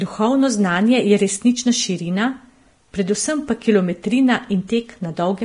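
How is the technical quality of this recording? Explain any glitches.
The technical quality is poor. Heavy compression damage runs through the whole speech clip. Throughout, the treble is hissy and grainy, with roughened vowels and smeared consonant onsets. This is likely Vorbis compression at a low bitrate, around 31 kbps. The codec keeps a smooth spectral floor but quantises the upper residue so coarsely that detail turns into noise-like grit. On a spectrogram, everything stops abruptly at about 10.6 kHz, and the band below shows speckled, blotchy texture instead of clean harmonics.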